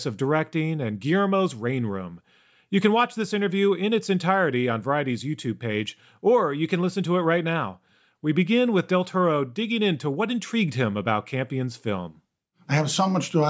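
Nothing stood out on listening to the speech here.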